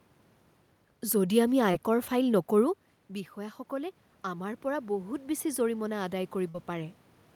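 At 1.71 to 1.74 s, just after "যদি আমি", there is a short concealed packet loss. About 20 ms of audio never arrived in time. The receiver extended the preceding sound to cover the hole, then blended back. It is heard as a brief smear.

From 3.08 s to 7.04 s, the automatic gain rises. The level at the microphone fell by about 12 dB after the talker moved back around 2.5 s. The gain control compensated slowly, adding about 6 dB. Voice and room noise swell together across those four seconds.

At 6.49 to 6.55 s comes a burst of packet loss. About 50 ms went missing in a row. The receiver continued the last sound and let it fade, giving a held buzz or fading hiss. The audio then resumes slightly further on, with that stretch gone.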